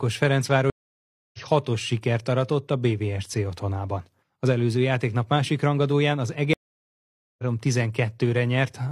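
At 0.70 s and again at 6.53 s the speech drops out in a stream reconnect. The connection broke and a fresh decoder restarted mid-stream. Silences of 0.63 s and 0.85 s resume roughly 0.7 s and one second further on, so speech is skipped rather than merely gapped.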